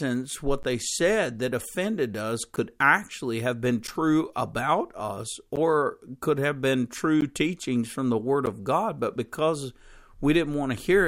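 Blocks of digital silence interrupt this speech recording at 0.63, 2.56, 3.87 (between "actually have been" and "about us"), 5.56, 7.21 and 8.46 s (after "teachings from the word"). Each is a hard dropout lasting about 11 ms, or 14 ms at 7.21 s, heard as a tick. The length fits a 512-sample buffer the program failed to fill in time.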